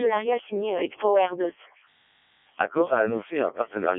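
The speech has been passed through a Codec 2 vocoder for its whole length, at what sounds like its lowest rate of around 0.7 kbit/s. Only pitch, voicing and envelope survive, resynthesised from sine waves, so the voice is robotic and buzzy, confined to a 300 Hz to 3.4 kHz line band with nothing above 3.5 kHz.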